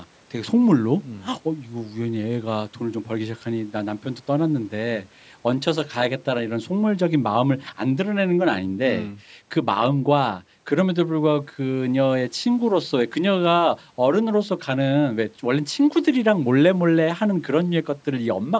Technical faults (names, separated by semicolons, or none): none